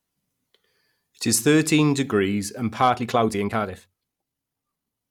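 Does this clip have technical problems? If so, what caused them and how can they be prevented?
Yes. From 2.85 s to the end, after "is thirteen degrees and", a time-stretched section plays about 1.63 times faster at unchanged pitch, sounding rushed. It was likely caused by software dropping short pieces to fit a shorter length. A spectrogram shows harmonic spacing unchanged while syllables crowd together, and the waveform shows compressed syllables with small seams. To prevent it, trim the content to fit the length instead of speeding up the audio.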